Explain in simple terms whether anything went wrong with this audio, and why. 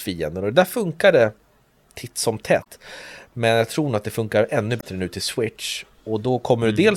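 Damaged data in a compressed stream shows up twice: at 2.60 to 2.66 s, right after "titt som", and at 4.77 to 4.84 s, between "att det funkar ännu" and "nu till". Bad bytes confuse the decoder, which loses its place and briefly blips while finding the next frame.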